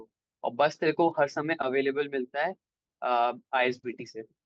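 Nothing stood out on listening to this speech recording that came over a call connection.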